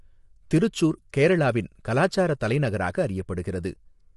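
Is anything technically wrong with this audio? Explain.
Yes. Throughout, the speech sounds rough and grainy, with noise filling the gaps between harmonics and nothing above 11.6 kHz. This is likely low-delay AAC compression (AAC-ELD) at a low bitrate, consistent with about 32 kbps. Its short frames resolve pitch harmonics poorly.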